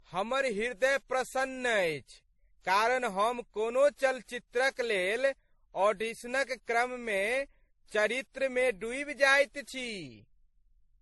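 Throughout the speech, stacked swirly and smeared artefacts sit under a flat spectrogram ceiling at 11.8 kHz. This suggests transcoding between lossy codecs, likely successive low-bitrate MP3 and WMA passes.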